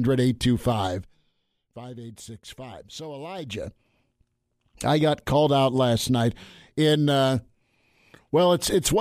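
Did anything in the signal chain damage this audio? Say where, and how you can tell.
Yes. Between 3.34 and 3.81 s the level changes by around 15 dB, and it does so in audible steps rather than a glide. This is zipper noise from a gain stage in the digital processing, at the driver or buffer level. The gain moves in 3 dB increments with no smoothing, about fifteen times a second, and each jump leaves a small click on the speech, heard as a brief ticking zip.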